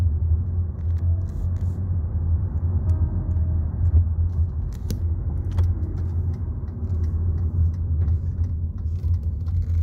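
From 3.95 to 3.98 s, a stage in the signal chain receives more level than it can pass, overdriven by about 3 dB, and responds with hard clipping: every peak above its ceiling is sliced flat. Those squared-off tops generate harmonics reaching high into the spectrum that the original sound never contained. Because the overload is brief and moderate, it comes through as a short, sharp crackle on the peaks rather than a sustained fuzz.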